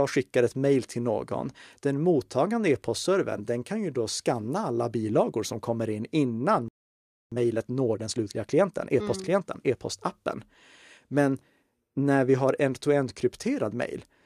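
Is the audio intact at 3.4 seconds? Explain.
Yes, the speech at 3.4 seconds plays through intact, with no dropout, click or other fault at that moment.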